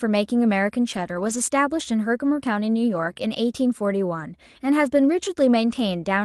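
Speech carried over an Opus call link at about 40 kbps, band-limited to 12 kHz. Its faults are lost packets rebuilt from error correction at 0.93–1.35 s, 2.93–3.11 s, 3.17–3.19 s and 5.05–5.15 s. At those points the decoder played the low-bitrate copy that the following packet carried, so the sound never breaks. Instead it turns briefly rougher and noisier. What sets this apart from concealment is that the audio is degraded there, not missing. At 3.13–3.17 s a short concealed packet loss occurs. About 20 ms of audio never arrived and nothing was available to rebuild it. The decoder extended the preceding sound and blended it back into the real signal, which produces a brief smear or wobble rather than a coarse but intact passage.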